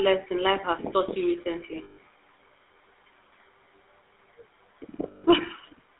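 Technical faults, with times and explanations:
Throughout: GSM full-rate codec. The speech is confined to a narrow telephone band of roughly 300 Hz to 3.6 kHz, and it carries a plainly audible buzzy, gravelly roughness. That grit comes from the coder rebuilding the voice from a vocal-tract model driven by a sparse, regularly spaced pulse train rather than the real waveform. The result fits the 13 kbps full-rate GSM coder. Band-limiting alone would sound thin but smooth, without that rasp.
1.84–1.98 s and 5.08–5.25 s: lost GSM frames. In each gap the sound freezes into a rough, metallic ring for about 140 ms and then 160 ms, which fits runs of about seven and eight 20 ms frames. The decoder keeps replaying the last good frame's settings. A plain dropout would go silent at once, and a repeated buffer would stutter. Here a held tone replaces the speech instead.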